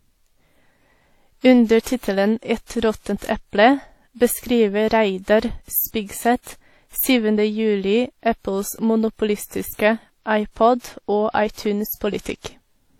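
Throughout the speech, two different sets of compression artefacts are heard together, the likely result of transcoding between lossy codecs. The sound points to a WMA encode near 48 kbit/s followed by HE-AAC near 40 kbit/s, with the later encoder spending bits re-coding the earlier artefacts and adding its own. A single low-bitrate codec would leave only one texture of damage, not two layered kinds.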